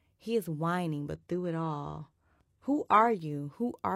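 Speech, where just after "is whining" the treble abruptly thins and turns swirly and synthetic from 1.15 to 3.15 s, with nothing above 12.3 kHz and no gap. This is an adaptive stream dropping to a lower bitrate, consistent with a very low-rate HE-AAC rendition.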